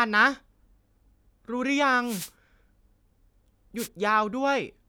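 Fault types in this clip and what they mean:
Wireless microphone noise hit: the FM radio link fades and receiver noise surges. Two short static swishes break into the speech, at 2.03–2.31 s and 3.77–3.88 s.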